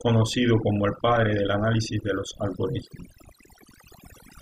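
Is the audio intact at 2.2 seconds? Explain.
No. At 2.2 seconds the speech shows overdone noise removal, present across the whole clip. The noise reduction is set so hard that bands near its noise estimate are cut out, taking quieter speech detail too, leaving a near-silent, twinkling background.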